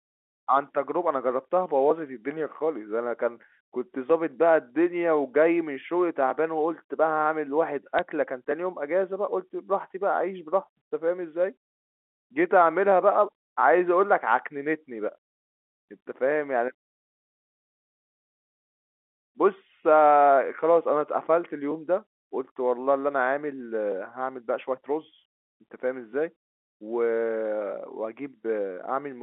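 Around 4.64 to 4.70 s there's a short cluster of sharp ticks, and then a single sharp tick at 7.99 s. Both are bit errors on a digital phone line: a few bits got flipped on the G.711 path, so individual samples jump to wrong values. When a flip lands on the sign or a high-order bit, that sample lurches, and you hear a click. The error rate is tiny, roughly one bit in a thousand or two, so the speech carries on undisturbed between the ticks.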